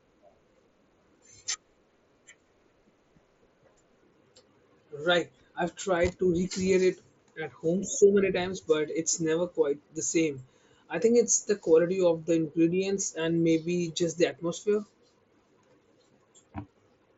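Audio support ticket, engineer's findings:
No faults found in the speech; the Bluetooth mSBC headset path sounds as expected for that codec.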